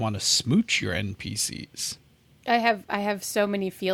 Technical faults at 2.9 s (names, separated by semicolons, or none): none